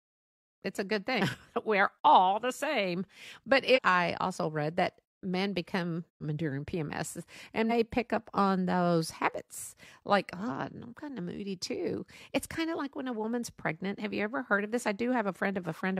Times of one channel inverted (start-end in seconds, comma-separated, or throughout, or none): none